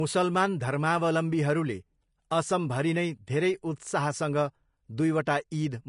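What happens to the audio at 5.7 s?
At 5.7 s the speech still carries the same fault present across the whole clip: low-bitrate audio saved at a high bitrate. It was likely first squeezed through a low-bitrate codec and then re-encoded as a high-bitrate MP3, which cannot restore what the first pass discarded. Nothing remains above 10.6 kHz, so the speech sounds dull at this moment, with the first codec's artefacts intact beneath the larger file.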